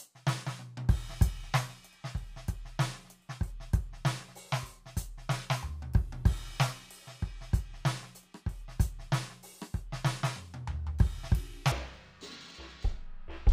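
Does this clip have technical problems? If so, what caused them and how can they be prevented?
Yes. From 11.72 s to 13.52 s the music shows stereo read as mono: interleaved left and right samples are played as one channel, halving speed and dropping pitch an octave. A spectrogram shows harmonics squeezed downward plus a fainter mirrored copy in the upper half. Prevent it by reading the channel count from the file header and de-interleaving before playback.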